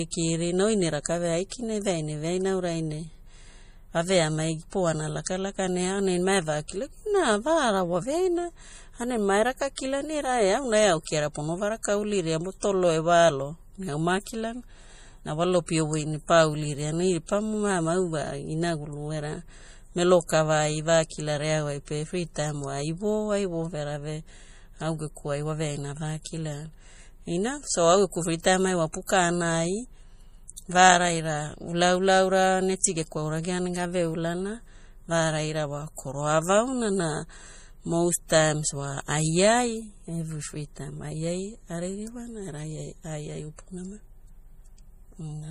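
Speech, and the whole 45 seconds has a watery, swirly quality with nothing above about 15.1 kHz and sibilants that chirp. That's plainly audible damage, likely from MP3 compression starved of bits, which fits a rate of roughly 40 kbps. On top of that there's pre-echo, a short hiss just ahead of sharp attacks at 1.03–1.06 s, 5.24–5.26 s and 32.81–32.84 s, each about 25 to 29 ms long. The codec spreads its noise across a block, so it leaks in before the onset and softens it.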